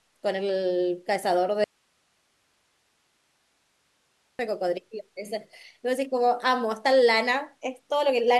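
Speech clip with an audio dropout to a faint residue from 1.64 to 4.39 s: the signal cuts abruptly, leaving hiss far below normal level, likely a loss upstream with the path still live.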